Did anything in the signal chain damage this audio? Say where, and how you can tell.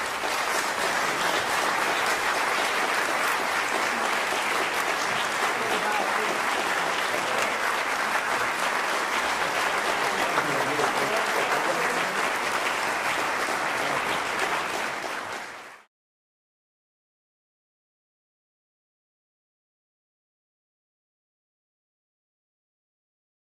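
Yes. From 0.0 to 4.0 s the treble is missing or synthetic and codec artefacts are stronger, then quality jumps with no gap. At playback, this is an adaptive stream starting at a low bitrate: sound fitting 24 kbit/s Opus, stepping up to 64 kbit/s once the connection was measured.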